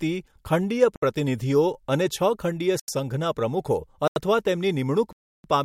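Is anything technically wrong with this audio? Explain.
Yes. The speech has four blocks of digital silence: 0.96 to 1.02 s (65 ms), 2.80 to 2.88 s and 4.08 to 4.16 s (85 ms each, which fits a 4096-sample buffer at 48 kHz), and 5.13 to 5.44 s (315 ms). In each block the output was replaced by zeros, likely because the buffer wasn't filled in time. The sound drops to dead silence and returns with no fade. Unlike a fading dropout or concealed packet loss, there is no smoothing or filler noise, just abrupt holes.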